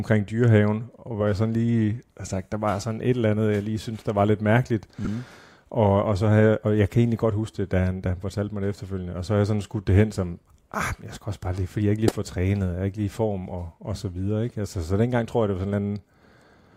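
At 5.05 to 5.08 s and 12.08 to 12.12 s, a single corrupt frame is decoded. Misread data puts energy at the wrong frequencies, giving a brief chirp, squeak, blip or burst of noise. The second is much louder.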